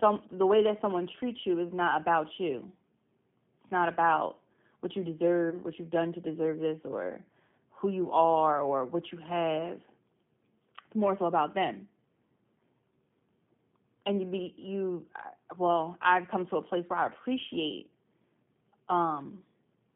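Throughout, the speech sounds slightly rough and synthetic, confined to roughly 150 Hz to 3.5 kHz: G.729 coding at 8 kbit/s, rebuilding the voice from a filter and sparse pulses. At 5.50 to 5.58 s, between "not about what you" and "what you've done to", the sound smears into a buzzy tone or coloured noise that fades, and stays weak briefly. This is VoIP packet loss concealed by the speech codec, consistent with one lost 20 ms packet, with the decoder extrapolating from its last frame.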